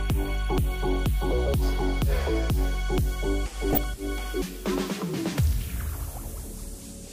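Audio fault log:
3.73 to 3.84 s, DAB burbling: weak reception lets a small fraction of a percent of bits slip past the error correction into the MP2 data, so corrupted samples put short noise blips into individual sub-bands over a short run of frames. For about 110 ms short noise blips from those sub-bands pop out of the programme before it settles.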